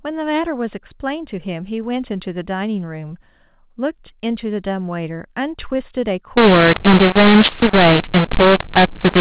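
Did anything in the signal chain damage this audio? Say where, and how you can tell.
Yes. At the codec stage, from 6.37 s to the end at 9.21 s, the speech turns harsh and gritty, and the gaps between phrases fill with hiss instead of going quiet. This is a mu-law and A-law mix-up: the mu-law G.711 bytes are being decoded with the A-law table, so each level maps to the wrong amplitude. The narrowband 8 kHz telephone sound of the earlier part stays intact. On a waveform, the pauses after 6.37 s show a raised noise floor and the peaks look distorted. On a spectrogram, broadband noise smears across the band up to 4 kHz.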